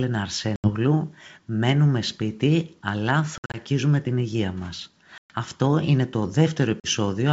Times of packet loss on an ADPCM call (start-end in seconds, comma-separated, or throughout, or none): 0.56-0.70, 3.38-3.58, 5.18-5.33, 6.80-6.87